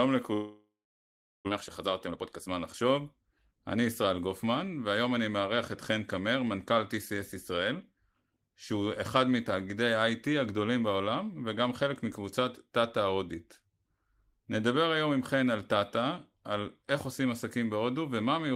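From 0.33 to 1.49 s the speech stops. A fading buzz carries on briefly, then about 0.75 s of silence follows, and the audio resumes with roughly 0.6 s gone. That is a long network dropout, likely a stall in packet delivery. Unlike a brief packet loss, the concealment gives out entirely.

The stall leaves about half a second of extra delay queued, so from 1.50 to 4.28 s a jitter buffer speed-up trims pitch-period pieces and plays the speech about 18% faster. The pitch stays unchanged, which separates this from a resampling error. The speech simply sounds hurried.

At 6.47 s there is a single sharp click. It is a tiny jump in the waveform, likely from dropped samples amounting to a small fraction of a millisecond. The waveform jumps without any sound going missing, so it is a click rather than a gap.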